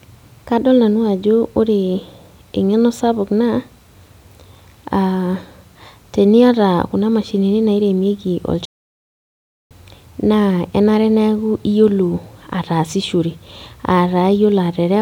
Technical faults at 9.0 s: playback stall

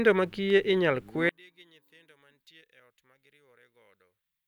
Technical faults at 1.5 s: one channel inverted

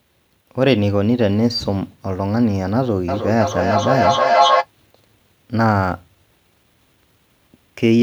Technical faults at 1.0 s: none

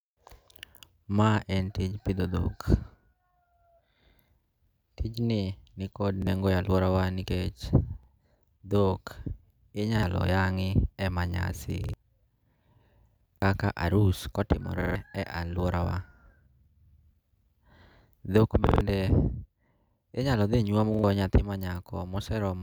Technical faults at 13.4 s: repeated buffer

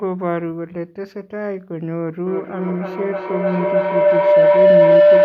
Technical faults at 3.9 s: feedback howl

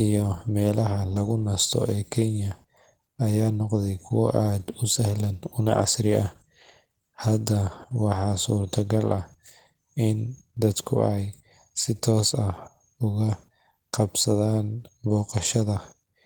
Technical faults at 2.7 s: Opus voice compression

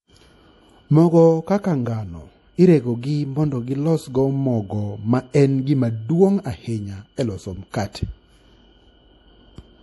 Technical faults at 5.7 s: MP3 compression

